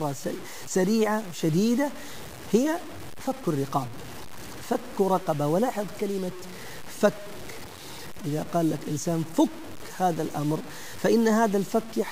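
The speech was likely stored at low bit depth without dither, fitting about 6 bits, so grainy distortion about 20 dB down follows it throughout.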